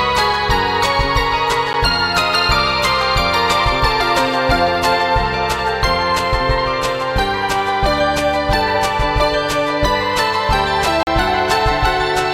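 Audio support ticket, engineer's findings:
Block of digital silence at 1.73 s: 10 ms of samples zeroed, hard cut in and out, heard as a single tick. Probable cause: output buffer not filled in time or invalid values in processing.

Block of digital silence, 11.03 to 11.07 s: 40 ms of zeros, heard as a short hole in the sound. Same mechanism, with a longer gap.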